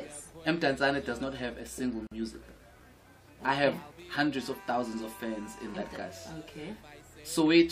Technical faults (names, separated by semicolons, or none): gap at a join of encoded pieces